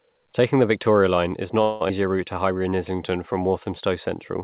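At 1.62 s the sound stops moving and a fading buzz carries on until 1.83 s. This is a call audio freeze, likely from late packets emptying the jitter buffer. About 185 ms is inserted, and nothing is lost.

From 1.89 to 1.91 s playback skips ahead. Roughly 150 ms of audio is gone, and the two sides are joined almost directly.

From 2.34 to 3.40 s a jitter buffer slow-down repeats single pitch periods to rebuild its reserve. This adds 127 ms, so the sound runs at 89% speed with unchanged pitch and drawn-out sounds. Throughout, nothing is heard above 4 kHz, which fits a narrowband call codec such as G.711.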